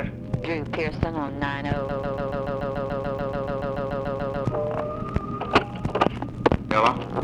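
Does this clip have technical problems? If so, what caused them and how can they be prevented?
Yes. From 1.89 s to 4.45 s the audio sticks in a broken-record loop: a fragment of about 144 ms repeats exactly, back to back, 18 times, giving a rapid stutter, and whatever should have played across those 2.6 seconds never arrives. The likely cause is a player, encoder or stream that stalled and kept resending the last buffer it held. Adequate buffering, with underrun detection that outputs silence rather than replaying stale data, prevents it.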